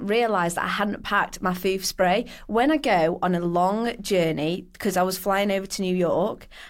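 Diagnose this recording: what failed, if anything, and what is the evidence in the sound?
Nothing in this speech recording points to a failure at any stage of the chain. No event in the sound calls for a diagnosis.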